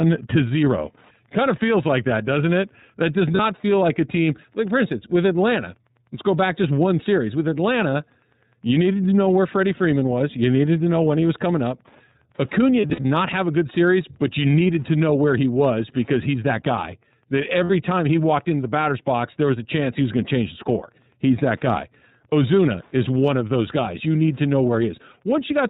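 Throughout, the speech carries plainly audible iLBC codec damage. Nothing above 4 kHz survives. The voice sounds a little rough and synthetic. The sound fits 30 ms iLBC frames at 13.33 kbps, each coded without leaning on the last.

Lost iLBC frames come next. From 3.35 to 3.40 s, a brief gap fits one lost 30 ms frame. The decoder repeats the last pitch cycle mixed with noise. It sounds like a short, buzzy held vowel. From 12.81 to 13.05 s, losses scatter over about 240 ms, the longest gap roughly 70 ms. From 17.64 to 17.70 s, about 60 ms is bridged. Each time, the voice comes back almost at once.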